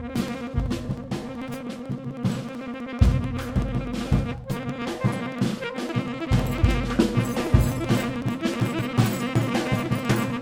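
Periodic USB or driver dropouts run from 0.1 s to 10.36 s: something on the system stalls the USB bus or audio driver every 63 ms, and each time roughly a millisecond of audio is skipped outright rather than padded with silence. Across the clip that adds up to well over a hundred tiny splices, about sixteen per second, heard as a steady train of small ticks riding on the sound wherever signal is present.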